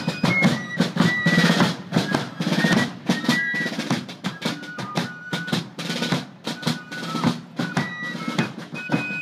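Gain pumping runs through the whole clip. The swing is roughly 5 dB. Loud and quiet passages sit close together, and the sound feels squashed and breathing. The likely cause is input gain set far too high, with a fast limiter or compressor clamping down on every peak.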